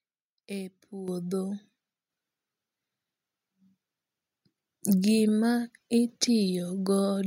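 Microphone volume stepped up at 1.08 s and again at 2.10 s in this speech clip. The call software judged the input too quiet and raised the device gain in single jumps of about 8 dB, then about 4 dB, lifting voice and background together.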